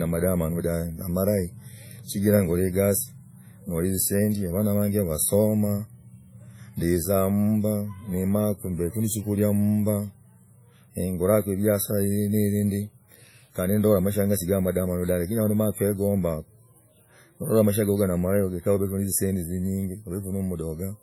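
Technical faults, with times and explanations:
Throughout, WMA compression: the speech sounds ringing and washy, with heavy codec damage and a hiss that breathes with the signal. This is likely a transform codec at a bitrate fitting about 32 kbps, smearing quantisation noise over tens of milliseconds and dropping weak spectral lines.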